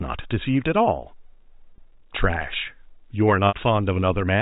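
At 1.76 s and again at 3.48 s, packet loss with pitch repetition: the receiver looped the last pitch period to cover gaps of 20 ms and 60 ms, which fits one and three lost packets. The first sounds briefly buzzy. The longer one fades before speech returns. Spectrograms show steady, repeated harmonics; waveforms show identical cycles decaying, within the 4 kHz telephone band.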